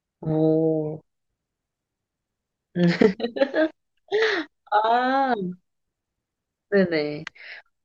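Nothing stood out as a technical problem at any point while listening to the speech.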